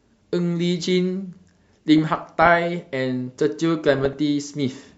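Across the whole speech clip the sound is dull and granular, with a gurgling edge. That is the signature of MP2 compression, likely from a Layer II encoder starved of bits, at a rate that fits something near 80 kbps. Upper sub-bands get switched off and the remaining ones are coarsely quantised. On a spectrogram the top end shows a hard ceiling with ragged rectangular blocks that flicker in and out from frame to frame.

From 1.98 to 2.59 s, and again from 3.88 to 4.18 s, DAB burbling breaks through: short blips of noise in single sub-bands laid over the speech. Bit errors that slipped past error correction, at a rate of a few tenths of a percent, corrupt samples and scale factors, so single sub-bands jump in level for up to a frame. A spectrogram shows isolated bright horizontal bars popping up in narrow bands, and the waveform carries small irregular bursts.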